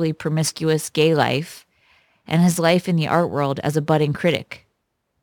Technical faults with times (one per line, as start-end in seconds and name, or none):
0.00-5.22 crude rate conversion